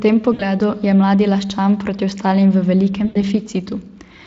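At 0.33 to 0.47 s and 3.05 to 3.18 s, VoIP packet loss is concealed by the speech codec. About 60 ms, then 100 ms, goes missing. The decoder stretches the last sound into a fading buzz or coloured noise, and the speech stays weak briefly afterward.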